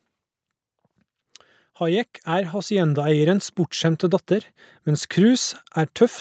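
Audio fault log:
1.77–4.32 s, automatic gain rising: the level climbs by about 8 dB over roughly two and a half seconds, and the background comes up right along with the speech. That's the gain control deciding the input was too quiet and slowly cranking itself up.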